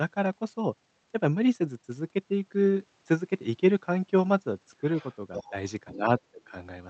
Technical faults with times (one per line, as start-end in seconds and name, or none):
4.97-5.49 other side's voice leaking through
5.42-5.54 speech suppressed in double talk
5.87-5.96 other side's voice leaking through
5.95-6.40 speech suppressed in double talk